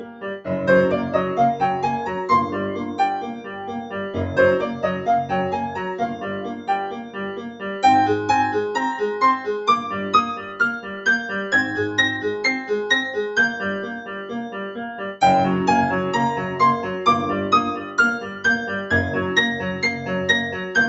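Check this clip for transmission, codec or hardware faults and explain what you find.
The problems here come from processing, not transmission or hardware. The call path and its codec pass audio up to 8 kHz, as expected.

Noise suppressor applied to music or sounds: Throughout, a speech noise suppressor treats steady sound as noise. Level swings by roughly 10 dB, so sustained parts pump and thin.

Sound cut by the noise suppressor: Dips occur at 0.0–0.47, 3.28–3.94, 6.13–7.64, 10.36–11.06, 13.83–14.32, 14.71–15.21 and 17.82–18.44 s. Each drops about 8 to 11 dB, sinking held sound while onsets survive.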